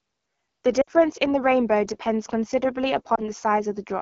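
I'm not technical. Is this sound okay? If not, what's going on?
No. The whole clip passes through the AMR wideband (HD Voice) codec, the phone-network voice compression, set to one of its lowest quality levels. At that setting the speech sounds rough and raspy throughout, because the codec rebuilds the voice from a simplified model.

There are also two spots of lost AMR speech frames, where radio errors wiped out pieces of the signal. From 0.81 to 0.90 s about 60 ms is missing, which fits three lost frames. The decoder reuses the last good sound and fades it quickly to near silence. From 3.15 to 3.28 s a single frame's worth, about 20 ms, is lost, giving a brief dip or warble. Each time, the voice comes back weak or rough for a moment.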